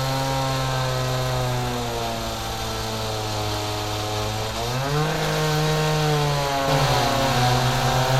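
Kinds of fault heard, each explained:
Doubled audio track: from about 6.68 s to the end, a second copy of the sound runs roughly half a second behind at about the same level, with no decay or room colour, and it cuts in abruptly. That likely comes from a slower second capture path.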